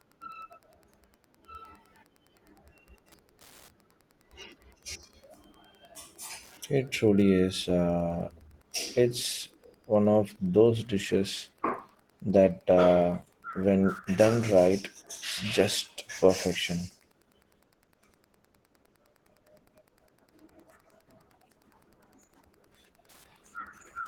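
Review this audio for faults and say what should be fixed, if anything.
Wi-Fi interference runs through the whole clip: a nearby Wi-Fi radio's beacon, sent every 102.4 ms, is being rectified by the audio circuit, so a faint, steady ticking at about ten per second sits roughly 40 dB beneath the speech. Moving the radio away from the audio wiring, and shielding or filtering the input stage, would prevent it.

An adaptive stream at a lower bitrate takes over from 7.62 s to the end. The connection slowed and the player switched to a leaner version, which fits a drop from about 64 to 16 kbit/s Opus. Quality changes abruptly, with codec artefacts rising and no gap. Giving the stream a steadier connection or a higher minimum bitrate would prevent it.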